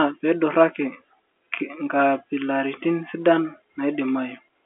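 Nothing goes wrong anywhere in this speech clip, which simply carries the narrow sound of an ordinary G.711 mu-law phone line, with its band running from about 250 Hz up to 3.4 kHz.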